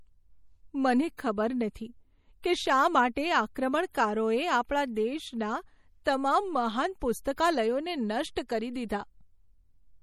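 MP3 compression runs throughout: the speech has a watery, swirling texture from weak frequency lines dropping in and out, which likely points to a low-bitrate MP3 encode around 48 kbps. Pre-echo appears at 1.17 s, at 6.04 s just before "તમામ મહાન", and at 7.36 s just after "તમામ મહાન". Each time, the codec spreads noise sized for a sharp attack across its whole block, so a short hiss of about 15 to 19 ms leaks in ahead of the onset and softens it.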